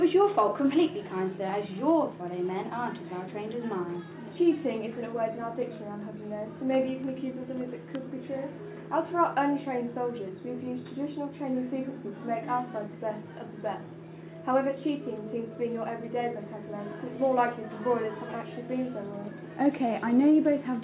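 Nothing stood out as a technical fault on listening.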